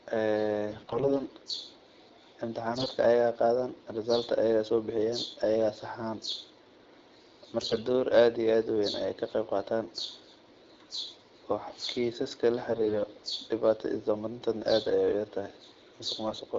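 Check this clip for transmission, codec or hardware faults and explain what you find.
There's one recurring fault here: AMR bit errors, in five short bursts at 0.70–1.15 s, 2.71–2.91 s, 7.60–7.80 s, 12.70–12.99 s and 16.28–16.38 s. The link flipped a lot of the weakly protected bits in the AMR frames, somewhere around a tenth of them in the worst bursts. Because the checksum on the important bits still passed, those frames got decoded anyway. The excitation pulses land in the wrong spots and the fine pitch, gain and spectral values drift, so the speech holds its rough pitch and level but turns hoarse, scratchy and gargly for those moments. The AMR wideband (HD Voice) codec underneath is running at 12.65 kbit/s, with just light coding colour.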